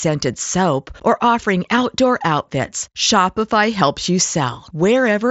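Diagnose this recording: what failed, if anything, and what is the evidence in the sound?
The failure is on the Bluetooth link between headset and phone. It shows up as concealed Bluetooth headset packet loss from 3.04 to 3.07 s. About 22 ms of the speech went missing, which fits three consecutive lost mSBC frames. The receiver filled the gap by repeating the best-matching recent stretch of waveform. The result is a brief buzzy, held tone at full level, with a slight warble as the real signal resumes. Elsewhere the mSBC wideband codec carries the speech with only light graininess.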